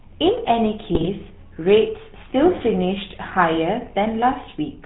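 Right from the start the whole clip carries the sound of the GSM full-rate codec, and the damage is plainly audible. The character fits the old 13 kbps full-rate coder. It models the vocal tract and drives it with a sparse, regularly spaced pulse train, throwing away most of the excitation detail, so the speech gets that buzzy, gravelly edge. Nothing comes through above about 4 kHz, which leaves it dull and boxy on top.

Then at about 0.92 s, running to 1.08 s, you get a burst of GSM bit errors. Corrupted bits reached the decoder, so the filter, pitch and gain values it rebuilt were wrong. The spectrum bends and the level jumps frame by frame, and the speech breaks into squawks, pops and gargling for that sixth of a second. The length of the burst points to several consecutive frames being hit, which fits a weak radio link with an error rate of around 1 percent.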